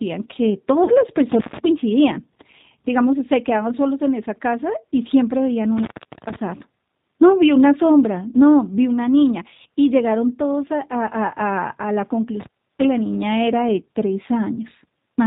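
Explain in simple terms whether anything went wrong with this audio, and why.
Several things went wrong. The whole recording passed through the G.729 codec, a telephone-grade speech compressor. It doesn't store the sound itself. It stores a rough model of the speaking voice: the shape of the vocal tract, the pitch, and a few pulses per short frame. The receiving end rebuilds the voice from that model. Everything above 4 kHz is dropped, so the speech sounds muffled, and the rebuilt voice has a plainly audible rough, slightly synthetic quality throughout.

At 0.84 to 0.91 s there is VoIP packet loss concealed by the speech codec. About 40 ms of audio never arrived, which fits two lost packets. The decoder filled the gap by repeating and stretching its last frame of voice while turning it down. That produces a brief buzzy, smeared sound. Each rebuilt frame depends on the one before, so the voice sounds a little weak or off for a moment after real audio resumes.

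There are two dropouts from an intermittent contact, where a loose plug or cable briefly stops carrying the signal. The first runs from 1.32 to 1.59 s, with the line open for about 130 ms. The second runs from 12.40 to 12.85 s, with the line open for about a third of a second. In each, the sound cuts out with crackle where the connection breaks and remakes, and faint hiss remains while the line is open.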